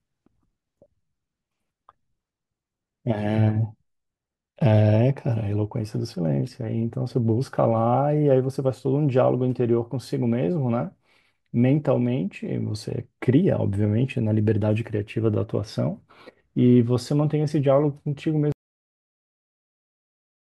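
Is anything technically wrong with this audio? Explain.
Yes. At 18.52 s the speech has a cut-off end: the final buffers were never written out, so the recording stops partway through a sound. It drops straight into digital silence with no natural decay, and that silence holds for the remaining two seconds or so.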